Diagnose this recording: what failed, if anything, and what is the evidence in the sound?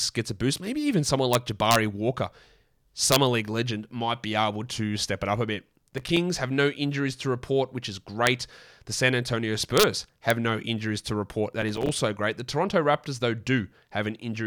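Integer overflow in a gain or mixing stage, most likely at sample-format conversion, causes the violent sign-flip cracks on loud peaks. They fall at 1.33 s, just after "even someone", then at 1.71 to 1.76 s, 3.12 to 3.16 s, 8.27 s, 9.78 to 9.83 s and 10.30 s. The peaks exceed full scale by only about 0 to 2 dB. Instead of being clamped, each wraps to the opposite extreme, so the cracks are far harsher than ordinary clipping.

Processor overload crackle sits at the driver/buffer stage. Gritty tearing runs from 5.91 to 6.17 s, between "it up a bit" and "have no injuries to", and again from 11.62 to 11.89 s, right after "no injuries to report". The texture is a rapid train of tiny dropouts to silence, which fits buffers of roughly 3 ms. Around fifteen of them in a row missed their deadline while the processor was overloaded, each leaving a hard-edged gap.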